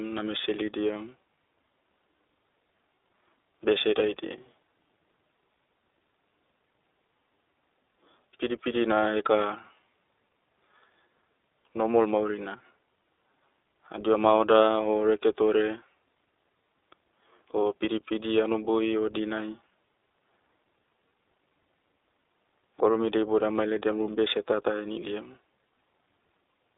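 Throughout the speech the sound is thin, slightly rough and synthetic, confined to a telephone band of about 300 Hz to 3.7 kHz. This is the iLBC codec, coding each 20 ms frame independently at a rate that fits its 15.2 kbps mode, with plainly audible damage.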